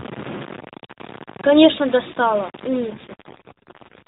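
A speech clip with a gritty, grainy edge the whole way through, and the likely cause is low bit depth without dither. The quantisation error sits only around 15 dB under the speech and tracks it, so quieter stretches sound rough and crunchy. That points to roughly 5-bit rounding. The phone-band sound itself is what you'd expect from the AMR narrowband mobile codec, with nothing above 4 kHz. Then from 2.86 s to the end there's an AMR rate drop. The bandwidth stays put and nothing cuts out, but the voice turns buzzier and more synthetic, which fits the codec stepping down from 12.2 to 5.9 kbps.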